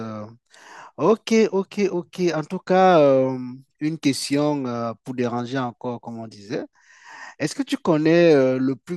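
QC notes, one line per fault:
No faults heard anywhere in this speech.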